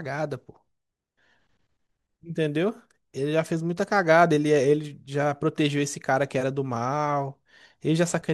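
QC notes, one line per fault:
No faults found.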